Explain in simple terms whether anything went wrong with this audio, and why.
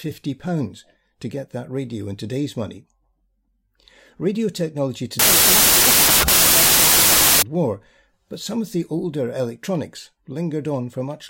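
From 5.19 to 7.42 s the speech turns into loud hiss with the talking buried underneath, 1.5 times too fast and too high. This is a wrong sample width fault: 16-bit audio is read as 24-bit, scrambling bytes. A simple speed error stays clean.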